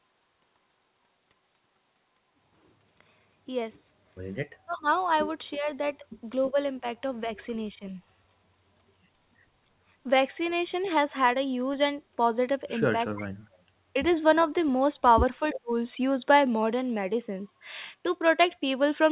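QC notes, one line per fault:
4.6–7.97 s, 13.13–13.71 s, 15.39–15.71 s: speech suppressed in double talk. The voice dips or drops out in pieces, by roughly 25 dB in the first stretch (about 0.7 s affected in total), roughly 40 dB in the second (about 0.5 s) and roughly 35 dB in the third (about 0.15 s). The likely cause is an echo canceller that could not separate the near talker from loudspeaker echo while both sides spoke, so it attenuated everything. On a spectrogram, the harmonic bands below the 4 kHz ceiling of the G.711 path fade into pale vertical gaps. On the waveform, the envelope pinches to near-silence mid-phrase.
10.83–10.89 s, 13.06–13.27 s, 15.55–15.6 s: echo leak. Short scraps of a delayed copy of the voice arrive 334 ms after the original. They are faint at first, about 35 dB and then about 25 dB below the speech, but the last one is only about 10 dB down. This is likely far-end loudspeaker pickup that the echo canceller failed to remove fully. 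On a spectrogram, these show as ghostly repeats of earlier harmonic patterns shifted 334 ms later. On the waveform, they appear as small low-level bursts sitting in pauses or under the speech.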